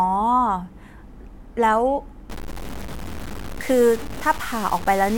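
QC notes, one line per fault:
2.30 to 5.17 s, low bit depth without dither: gritty, signal-following distortion about 15 dB below the speech, likely from undithered truncation to roughly 5 bits.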